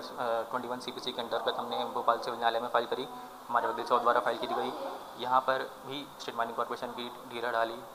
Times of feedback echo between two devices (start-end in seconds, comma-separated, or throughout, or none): none